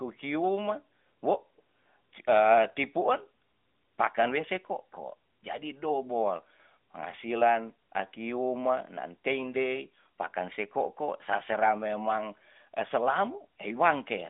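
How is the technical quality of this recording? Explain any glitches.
No glitches turn up anywhere in this speech recording; it has the narrow, telephone-like character of the AMR narrowband mobile codec, with the band held to roughly 200 Hz to 3.6 kHz, nothing above 3.7 kHz, and only a light synthetic colouring that fits the codec's 12.2 kbps mode.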